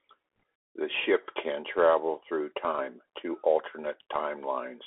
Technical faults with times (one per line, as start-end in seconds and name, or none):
0.00-4.86 Bluetooth CVSD headset codec
0.40 bit errors on a Bluetooth voice link